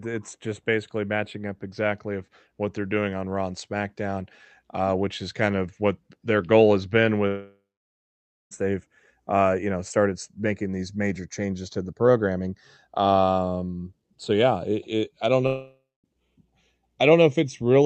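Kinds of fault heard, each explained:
channels drifting apart: The two channels run on clocks that disagree by roughly 30 parts per million, so the delay between them creeps up through the speech, ending at a bit under half a millisecond. Summed to mono, the comb notches this creates slide slowly through the spectrum, heard as a gradual flanging. On a spectrogram it shows as dark notch bands gliding across the speech band, while the waveform looks unremarkable.
long network dropout: The audio stops after "their goal has been" at 7.27 s, likely because a long run of network packets never arrived. A fading continuation of the last sound fills the gap, then about 0.9 s of silence, and speech resumes at 8.53 s with "they've uh you know" and about 1.2 s lost. After "it it I don't" at 15.47 s, about 0.58 s is lost, including about 0.24 s of silence, until 16.06 s. The waveform decays to a flat line, and the spectrogram shows smeared harmonics giving way to an empty band.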